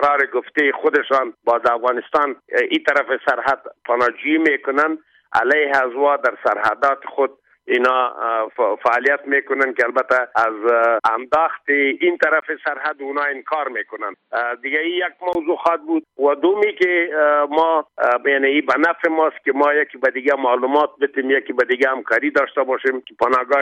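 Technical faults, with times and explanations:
12.40 to 15.35 s, input switched to a poorer device: the recording likely jumped to a lower-grade input, so after a 20 ms gap the sound turns dull and boxy with nothing above 4.6 kHz, drops a few dB, carries faint new background noise, then clears again.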